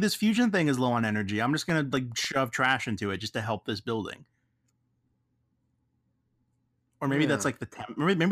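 From 1.70 to 2.79 s, after "on energy I'm just", CD scratch ticks appear. A disc blemish defeats error correction each revolution, leaving five brief, millisecond-short ticks.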